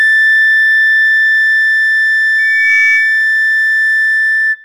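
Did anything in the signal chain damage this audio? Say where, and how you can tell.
Yes. Between 2.38 and 3.26 s a loudspeaker feedback squeal rises over the music: a single steady tone at 2.3 kHz that swells over roughly a third of a second until it is about as loud as the music itself. The damage happens in the analogue stage. A microphone was picking up the loudspeaker it fed, and at 2.3 kHz the loop gain passed unity, so that frequency kept reinforcing itself.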